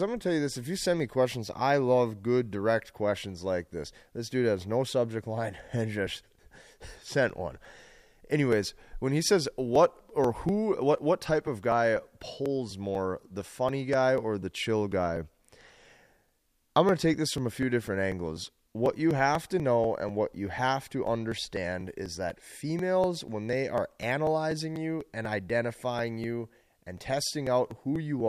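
Periodic USB or driver dropouts, 6.07 to 28.20 s: the bus or driver stalls every 0.246 s, skipping a few milliseconds and leaving regular ticks.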